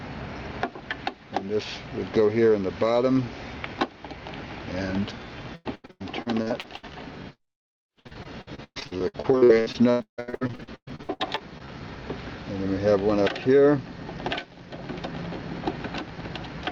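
Two bursts of repeated packet loss (robotic sound) hit this audio, from 5.55 to 6.93 s and again from 7.35 to 11.70 s. Dropouts up to about 160 ms get patched by stretching the last sound, covering around 40% of each span, hence the choppy texture.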